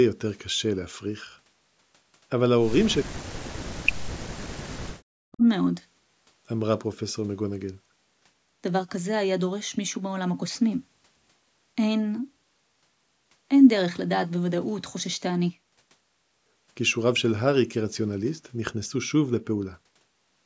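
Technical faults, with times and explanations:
2.95–4.28 s and 5.15–5.44 s, speech suppressed in double talk: the speech dips by up to about 40 dB. This is likely an echo canceller that could not separate the near-end speech from the loudspeaker echo of simultaneous far-end talk and attenuated the near-end signal.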